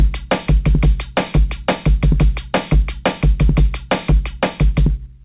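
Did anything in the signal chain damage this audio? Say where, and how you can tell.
No, nothing damaged it.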